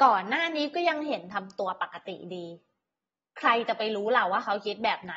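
From start to finish the speech sounds dull and smeared, with nothing above about 7.7 kHz and a warbly fizz on sibilants. That's likely AAC compression at a low bitrate, roughly 24 kbps, lowering the cut-off and thinning out the spectrum.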